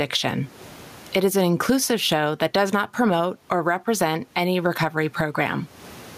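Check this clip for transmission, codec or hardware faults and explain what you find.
One fault runs through the whole speech clip: gain pumping. The level breathes from start to finish. The swing is large, around 20 dB. The likely cause is input gain set far too high, with a fast limiter or compressor clamping down on each peak and releasing in the gaps. The room noise sits about 43 dB below the speech. Loud and soft parts sit close together, so the speech sounds squashed.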